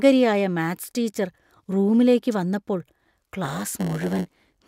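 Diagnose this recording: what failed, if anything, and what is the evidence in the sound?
Block size mismatch (padded) in the buffer stage, 3.44 s to the end: zero-padded blocks give a 100 Hz buzz, 0.919 speed, timbre intact.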